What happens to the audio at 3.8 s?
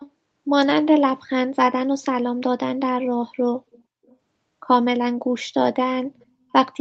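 A far-side echo canceller likely failed to remove loudspeaker sound picked up by its microphone, causing an echo leak from 3.73 to 3.83 s: a very faint copy of the speech, delayed 487 ms, surfaces as a brief scrap beneath the main signal.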